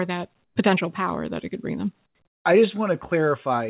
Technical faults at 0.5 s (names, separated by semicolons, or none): comfort noise in place of the background